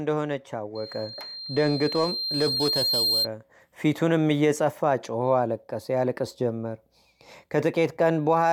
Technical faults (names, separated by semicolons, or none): loudspeaker feedback squeal